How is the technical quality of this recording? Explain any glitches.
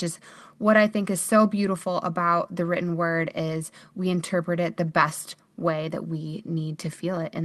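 The technical quality of this speech recording is sound, with no glitches to explain.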